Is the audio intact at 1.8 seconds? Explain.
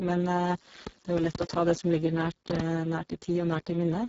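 No. A train of clicks runs from 0.87 to 2.61 s, covering the 1.8 s mark. About seven similar pops arrive unevenly, around 4 per second, and stand well above the speech. The likely cause is interference or a faulty connection or power supply injecting short pulses.

The Speex codec also colours the whole clip, including this moment. The excitation is starved of bits, so the speech sounds hoarse and noisy, which fits a very low setting near 6 kbps. Nothing is present above 7.7 kHz.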